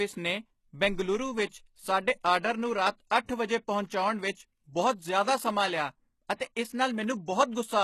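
A speech recording with heavy codec damage throughout, most likely from HE-AAC compression at a very low bitrate, consistent with about 16 kbps. Nothing is present above 12.3 kHz, and the upper band sounds synthesised rather than captured: copied lower-band content shaped by a coarse envelope, so its harmonics fail to align with the fundamental range and sibilants come across gritty and metallic. A pre-echo runs from 1.46 to 1.52 s, where quantisation noise from a transform block spreads about 54 ms ahead of a sharp attack, leaving a brief hiss before the onset and softening the attack itself.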